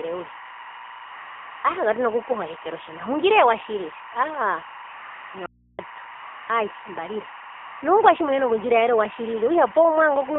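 A speech recording heard through a mobile phone link, with a constant timecode bleed underneath: a chirping warble that flips between tones near 1 kHz and 2 kHz, about 20 dB below the voice and clocked at 24 frames per second. On a spectrogram it shows as two steady horizontal bands with fine, regular striping. The whole clip also carries the AMR narrowband mobile codec. Everything sits between roughly 300 Hz and 3.5 kHz with nothing above 4 kHz, and the voice is plainly buzzy and synthetic, which fits a low bitrate near 7.4 kbps. A spectrogram shows a hard ceiling and smeared, blocky harmonics. AMR comfort noise replaces the real background at 1.06–1.64 s, 4.90–5.34 s and 7.54–7.82 s: the phone stopped sending speech frames and substituted a smooth, even hiss that switches in and out abruptly. These stretches appear as flat, featureless noise blocks with clean edges. An audio dropout to a faint residue runs from 5.46 to 5.79 s. 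The voice cuts out abruptly, leaving only hum about 35 dB below normal level, most likely from a brief loss of signal while the path stayed live. The waveform drops to a thin, near-flat trace, and the spectrogram shows low hum lines.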